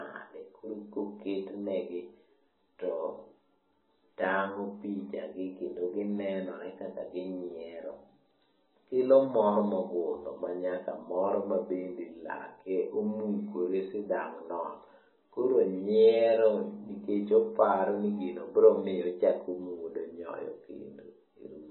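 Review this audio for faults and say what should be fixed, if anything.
Throughout the speech, nothing is present above 4 kHz, and the remaining band sounds watery and swirly, with smeared attacks and chirpy sibilants. That points to likely MP3 compression at a very low bitrate, consistent with roughly 16 kbps, where the encoder discards treble and toggles weak spectral lines between frames. To prevent it, keep the uncompressed source or encode at a substantially higher bitrate.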